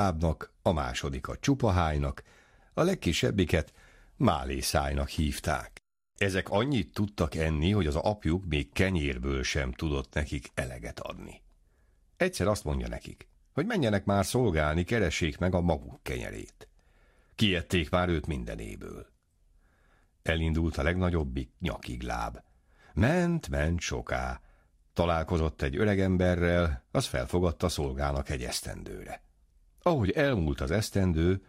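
Nothing in this recording stands out as a technical fault, so there's no moment in it worth flagging.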